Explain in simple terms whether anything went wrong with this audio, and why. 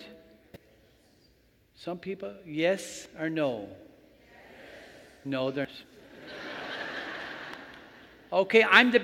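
Something did go wrong: damaged data in a compressed stream. Short chirps or blips cut in from 0.53 to 0.56 s, then at 3.06, 5.65 and 7.54 s. Bits of the compressed file were corrupted, so the decoder misread those moments and briefly lost its place.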